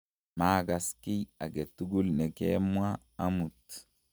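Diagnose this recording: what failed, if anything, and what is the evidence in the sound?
Nothing has failed here: listening through the speech, there's no audible fault at any point in the chain, so there's simply no evidence to point to.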